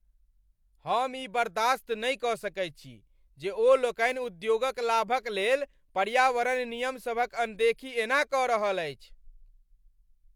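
Listening closely to the speech, nothing stood out as a technical fault at any point.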